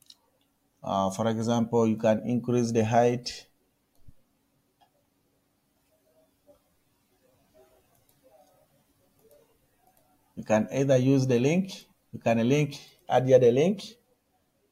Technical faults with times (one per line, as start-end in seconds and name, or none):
none